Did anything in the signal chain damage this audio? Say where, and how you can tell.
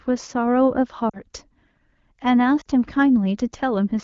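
Yes. Lost AMR speech frames on the network or radio link hit the speech at 1.09 to 1.18 s and 2.61 to 2.68 s, each a 40 ms run of two frames. In both places the decoder stretches the last good sound and then fades it, so the speech briefly smears and dips before recovering. On a spectrogram the harmonics flatten into a steady smear, and the waveform's amplitude tapers.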